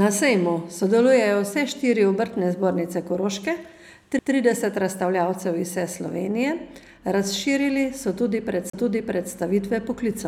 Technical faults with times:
4.19 CD skip
8.70-8.73 CD skip

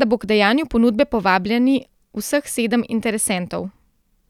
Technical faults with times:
3.38 dropped samples

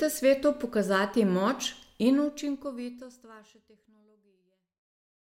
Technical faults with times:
none

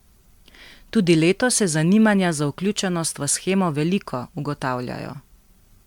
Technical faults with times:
0.00-5.86 generation loss

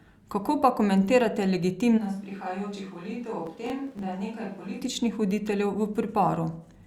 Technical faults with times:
1.99-4.80 switch to a distant microphone
3.46-4.03 processor overload crackle

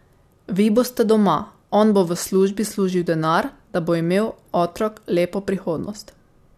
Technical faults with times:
none

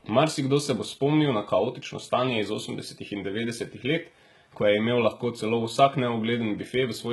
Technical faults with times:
0.00-7.12 HE-AAC compression

